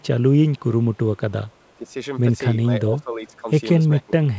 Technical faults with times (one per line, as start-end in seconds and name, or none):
0.52-0.74 echo leak
1.47-1.73 echo leak
1.77-1.89 speech suppressed in double talk
2.84-3.47 speech suppressed in double talk
3.97-4.38 speech suppressed in double talk